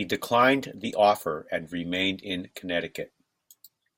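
No technical faults can be heard in this speech clip.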